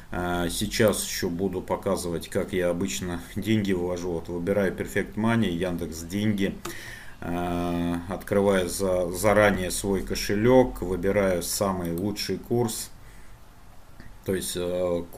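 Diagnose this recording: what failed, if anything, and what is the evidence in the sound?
Chunks out of order at the driver or buffer stage: around 9.54 to 9.56 s, a 10 ms chunk plays one chunk late, giving a brief jumbled moment with three hard joins.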